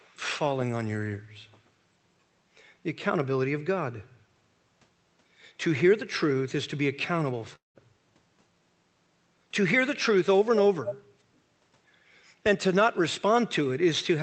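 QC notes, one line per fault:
0.00–0.16 s, echo leak: likely a far-end echo canceller letting residual loudspeaker pickup through, so a very faint copy of the speech returns about 213 ms late.
7.55–7.78 s, long network dropout: likely a stretch of packets never arriving, so the receiver extends the last sound as a fading buzz, then goes silent before speech resumes with that portion missing.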